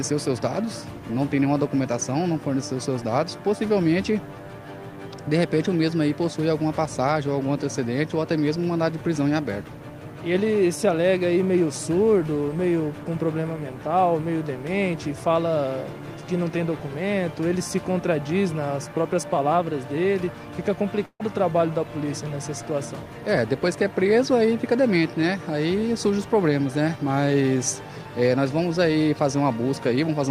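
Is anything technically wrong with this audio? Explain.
Yes. A burst of packet loss hits at 21.05 to 21.22 s. About 140 ms of audio never arrived. Concealment stretches the last sound, fades it out, then jumps ahead.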